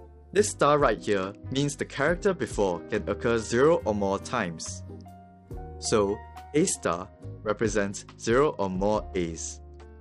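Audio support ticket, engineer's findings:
Bluetooth SBC bit pool drop, 0.43–3.74 s and 6.57 s to end. Treble dulls, gritty noise rises. Bluetooth link congested; encoder cut bits, starving top sub-bands, coarsely quantising the rest. Points to bit pool falling from 31 to 10, near 77 kbps.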